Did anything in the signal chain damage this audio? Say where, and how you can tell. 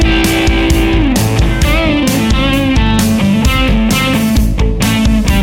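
Yes. Hard clipping runs through the whole clip: the loudest peaks are driven about 3 dB past full scale at the converter or a gain stage ahead of it, so a few percent of samples are cut flat. Those squared-off tops add high harmonics, heard as crackle on the loudest peaks.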